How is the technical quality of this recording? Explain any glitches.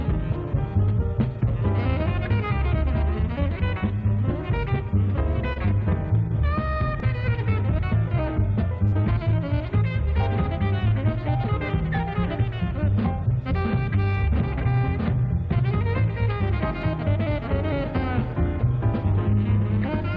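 The recording has two brief stalls from late packets, and the call codec leaves nothing above 8 kHz, a band limit that points to wideband G.722 at 64 kbps.

Short stall from a late packet, at 5.53–5.58 s and 8.87–9.02 s: a packet arrived late, the jitter buffer ran dry, and the receiver stretched the last sound, by 28 ms and then 48 ms, before resuming where it left off. Nothing is lost, but each moment drags slightly, with a faint buzz or dip.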